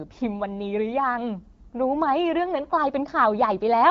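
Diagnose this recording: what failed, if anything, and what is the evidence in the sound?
Nothing failed: the speech comes through an AMR wideband (HD Voice) path at what sounds like the 12.65 kbit/s mode, carrying only the light coding texture expected at that rate, and no stage from analogue wiring through to playback shows evidence of a fault.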